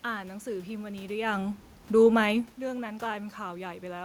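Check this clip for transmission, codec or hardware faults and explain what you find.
I found no transmission, codec or hardware faults in this speech recording. The room noise is part of the recording, and the level shifts around one second and again around two and a half seconds come from the talker moving relative to the microphone.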